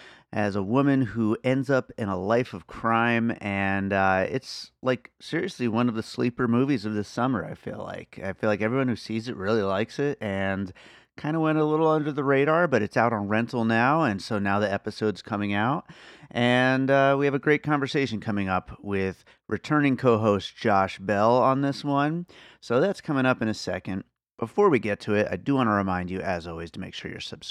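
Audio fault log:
No technical faults can be heard anywhere in this recording; the signal holds steady and continuous throughout.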